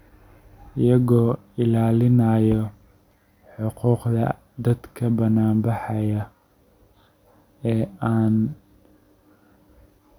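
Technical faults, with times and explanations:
No technical faults detected in the speech.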